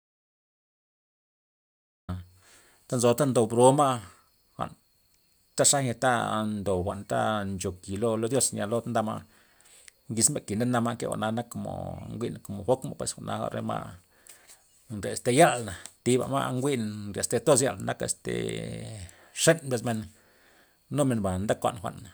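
Speech recording. An audio dropout to silence is already under way at the start and runs to 2.09 s. The gap is silent, with no room tone. The input was likely lost or muted while recording continued.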